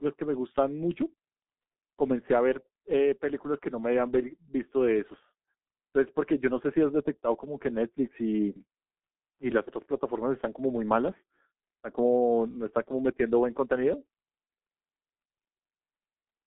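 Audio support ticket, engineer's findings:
Muffled, hoarse speech throughout, consonants smeared, no content above about 3.8 kHz, low end thin below about 200 Hz. Probable component: G.723.1 codec, heavy damage. Mechanism: 30 ms frames and slowly updated voice model at a rate consistent with about 6.3 kbit/s blur transients and roughen tone.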